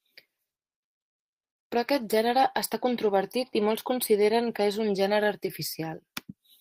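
The sender's clock runs around four percent faster than the receiver's, so the jitter buffer keeps overfilling; this clock drift between sender and receiver persists throughout the speech. From 0.25 s to 6.32 s, the receiver makes repeated timing corrections, trimming short pieces at uneven intervals to keep pace, which leaves a slightly hurried tempo, running about 104% speed.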